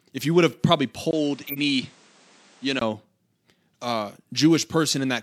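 Speech, and right after "you would have probably" at 1.11 s there's a brief dropout of about 20 ms. The sound then goes dull and boxy, with nothing above about 9.8 kHz, the level down by roughly 5 dB and a new noise floor sitting about 30 dB under the signal. It stays that way until 2.81 s, when the brightness returns. That's most likely an input switched to a poorer device, such as a different mic or a headset dropping into its call profile, because the narrower band, the quieter level and the new background noise all change at once and then revert. Inside that stretch, from 1.47 to 1.59 s, there's a harsh blip peaking around -10 dBFS. That's a corrupt frame decoded: damaged bits in a couple of compressed frames got played anyway, so the decoder sprayed energy into the wrong frequencies for roughly the length of those frames. Later, at 4.21 to 4.25 s, the audio jumps forward by about 50 ms, which points to compressed frames skipped. 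Frames were either missing or rejected as damaged, and the playback leapt past them.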